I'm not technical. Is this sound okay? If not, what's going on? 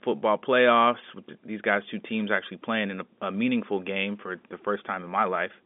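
Yes, it's ordinary phone-line sound with nothing wrong.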